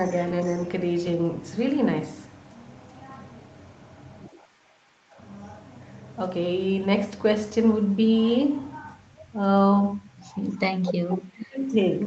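Speech, with two call-processing faults. An echo leak appears from 4.81 to 4.92 s: a very faint copy of the speech returns about 279 ms late, likely from a loudspeaker echo the canceller missed. From 10.8 to 11.74 s, the speech is suppressed in double talk. It drops very deeply in pieces, for about 0.7 s in total, likely because the canceller mistook it for echo.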